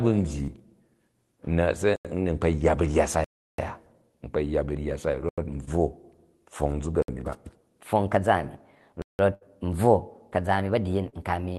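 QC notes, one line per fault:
0.43 to 0.50 s: short concealed packet loss. About 40 ms never arrived in time. The receiver extended the previous sound for 43 ms, leaving a brief smear.
1.96 to 2.05 s: block of digital silence. The audio drops to silence for 85 ms with no fade. The length fits a 4096-sample buffer missing its deadline.
3.24 to 3.58 s: block of digital silence. Just after "yya ba rya sai", a 341 ms hole opens with abrupt edges. The length points to a 16384-sample buffer left unfilled.
5.29 to 5.38 s: block of digital silence. Another 85 ms dropout to silence. It again fits a 4096-sample block.
5.65 to 5.69 s: short concealed packet loss. A 20 ms gap was patched with 20 ms of continued sound, heard as a quick wobble.
7.02 to 7.08 s: block of digital silence. A 60 ms cut to silence with abrupt edges gives a short hole.
7.82 s to the end: section at the wrong speed. The audio runs 1.2 times too fast, so pitch rises about three semitones and the delivery sounds hurried. 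The likely cause is playback against the wrong clock.
9.02 to 9.19 s: block of digital silence. A 171 ms hole. The length suggests an 8192-sample buffer that was not filled in time.
9.34 to 9.43 s: burst of packet loss. About 80 ms went missing. The receiver held and faded the last sound for 73 ms, then jumped ahead past the lost part.
11.09 to 11.14 s: short concealed packet loss. About 40 ms was lost and bridged with 31 ms of extended sound, heard as a brief smear near the end.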